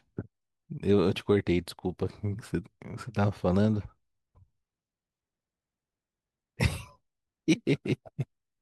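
No technical faults can be heard anywhere in this speech recording. There is nothing in the audio that calls for a time or an explanation of a problem.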